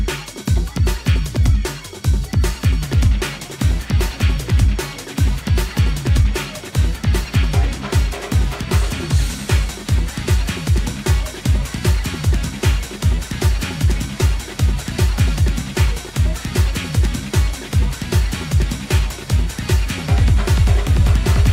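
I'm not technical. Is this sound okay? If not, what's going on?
Yes, nothing in this recording stood out as a problem when listening to it.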